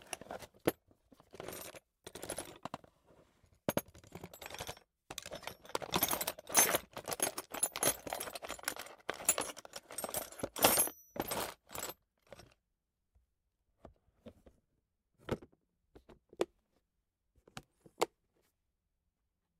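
From 1.30 to 5.09 s there's channel delay doubling: one side runs about 85 ms late, which fits a 4096-sample buffer, so the mono sum gives an equal-level slap echo.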